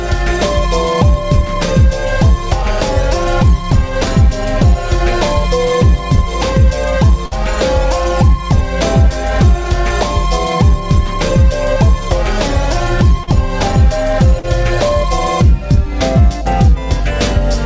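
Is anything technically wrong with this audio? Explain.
Yes. The audio has one burst of packet loss and two short concealed packet losses, heard through a call path whose band stops at 8 kHz, which fits a wideband codec such as G.722.

Burst of packet loss, 7.26 to 7.33 s: about 60 ms of audio never arrived in time. The receiver held and extended the last sound for roughly 54 ms, fading it down, so the sound turns briefly into a sustained buzz or dying hiss before resuming slightly further on, with that stretch gone.

Short concealed packet loss, 13.23 to 13.29 s and 14.39 to 14.45 s: each time about 40 ms failed to reach the decoder. The receiver filled the hole by continuing the preceding sound, repeating its pitch or imitating its noise, then crossfaded back into the real signal. Each gap is heard as a quick smear or wobble, and a brief transient falling inside it can disappear.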